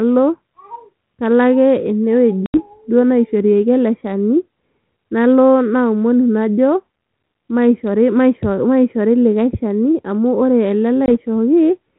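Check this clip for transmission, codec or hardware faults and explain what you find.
Two dropouts interrupt the speech, at 2.46 to 2.59 s and at 11.06 to 11.12 s. Both are packet loss on an ADPCM call. Each one cuts abruptly to silence, and when the speech comes back it briefly sounds clicky, distorted or at the wrong level before it settles within a few tens of milliseconds. The first gap sounds like about 80 ms missing, or roughly four packets, and the second like about 20 ms, or a single packet. While audio is missing, the receiving decoder's adaptive predictor and step size drift away from the sender's, so the first samples after the gap decode wrongly until the two sides realign. The band-limited telephone sound, with nothing above 4 kHz, fits G.726 ADPCM at 32 kbit/s.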